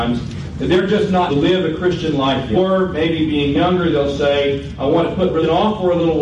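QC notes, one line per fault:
throughout hard clipping: peaks driven about 4 dB past full scale and cut flat on a small fraction of samples, giving brief crackle on loud moments rather than continuous fuzz.
1.26–1.32 s, 2.51–2.57 s, 5.39–5.44 s damaged data in a compressed stream: the decoder misreads corrupted frames and resyncs, producing brief glitches where it loses sync.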